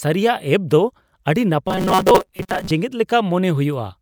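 From 1.68 to 2.71 s the speech becomes a rigid, metallic buzz: robotic sound from repeated short buffers, likely from a roughly 5.3 ms chunk replayed to cover about half the audio, imposing a 188 Hz buzz. A spectrogram shows evenly spaced 188 Hz harmonic bands, and the waveform shows identical short cycles.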